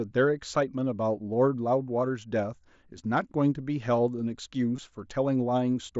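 A speech clip carrying one brief dropout, a concealed Bluetooth headset packet loss at about 4.77 s. About 15 ms of sound went missing on the link between headset and phone, which fits a couple of lost packets. The receiver filled the gap by repeating the closest-matching recent stretch of waveform. The mSBC wideband headset codec carrying the audio adds its own light graininess.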